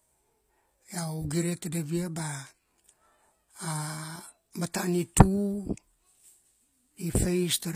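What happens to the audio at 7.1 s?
At 7.1 s you're hearing the same thing that runs through the whole clip: the top end sounds synthetic rather than real. The treble is bright but not quite right, s sounds come out gritty and a bit lispy, and there's nothing at all above 15.5 kHz. That's likely HE-AAC compression at a low bitrate, around 24 kbps. The codec keeps only the lower spectrum and fakes the highs by copying lower bands upward, so the harmonics don't line up.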